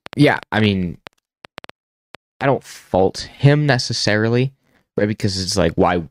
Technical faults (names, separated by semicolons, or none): train of clicks